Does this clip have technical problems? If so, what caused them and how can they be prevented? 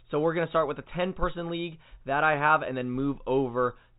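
No, this clip has no technical problems, so there is nothing to prevent.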